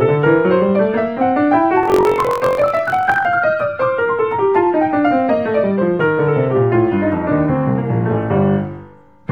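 Block size mismatch (truncated), 1.81 to 3.27 s: the tail of each 1024-sample block is discarded, causing a 45.9 Hz buzz and audio running 1.07 times fast at near-normal pitch.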